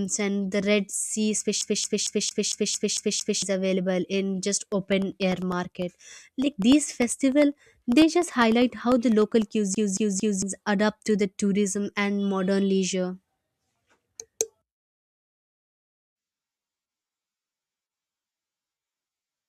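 From 1.61 to 3.42 s the speech sticks like a CD stuck on one turn: a scratch keeps throwing the laser back, so one 0.23 s slice repeats eight times, each jump marked by a brief mute, giving a fast, even stutter.

Between 4.62 and 9.42 s, periodic USB or driver dropouts cut in every 0.1 s. Something blocks the audio path at a fixed interval, and each time well under a millisecond of signal is replaced by silence. The result is about fifty regular ticks riding on the speech.

At 9.75 to 10.42 s the CD skip returns, repeating the same 0.23 s loop three times with the same mute at each jump.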